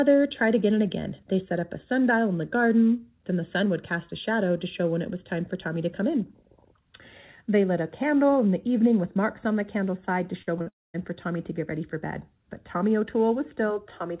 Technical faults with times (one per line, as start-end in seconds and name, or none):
10.42-10.49 burst of packet loss
10.59-10.68 short concealed packet loss
10.68-10.96 long network dropout